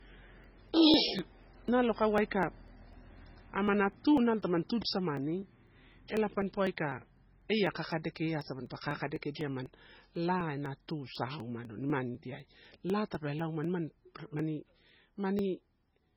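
The whole recording sounds heavily squeezed. There's nothing above 5.6 kHz, and the speech has that watery, swirly quality where quiet detail flickers in and out from one frame to the next. Sibilants come out as metallic chirps, and consonant attacks smear. That's very likely MP3 compression at a very low bitrate, something around 16 kbps, where the encoder runs short of bits, chops the treble at a fixed point and drops weak frequency components.

From 0.19 s to 15.89 s there's a steady train of ticks, one every 0.25 s, so about four a second and around seventy in all. These are periodic USB or driver dropouts: something in the background stalls the bus or driver on a fixed schedule, and each time roughly a millisecond of audio is skipped outright rather than filled with silence. The jump in the waveform makes a click that you only hear while there's signal underneath it.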